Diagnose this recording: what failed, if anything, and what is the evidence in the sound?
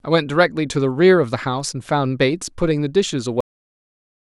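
The failure is a cut-off end, at the storage or playback buffer stage. The speech stops abruptly at 3.41 s, mid-sound. It falls straight to digital silence with no decay. The final buffers were never written or played, so the remaining audio is simply missing.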